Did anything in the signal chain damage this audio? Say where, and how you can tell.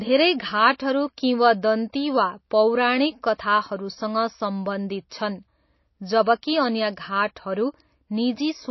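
Yes. Throughout the clip the speech sounds watery and swirly, the damage is plainly audible, and nothing is heard above 5.8 kHz. That points to the codec stage, likely MP3 compression at a bitrate around 24 kbps. Starved of bits, the encoder cuts the treble and drops weak frequency lines.

At 5.1 s a hiss about 17 ms long comes just before a sharp attack, which sounds smeared. This is pre-echo from the same codec. Noise sized for the loud onset spreads across the whole transform block and fills the quiet moment before it.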